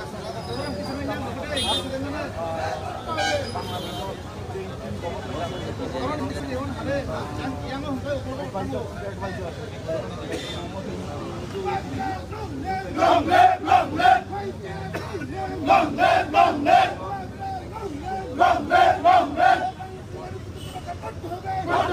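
At 6.2 s the sound briefly scrambles, with a jumbled moment that ends by 6.4 s. These are chunks out of order: one 100 ms chunk arrived late and plays after its successor, swapping the pair and leaving three hard joins.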